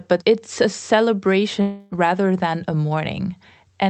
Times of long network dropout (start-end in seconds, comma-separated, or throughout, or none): 1.61-1.93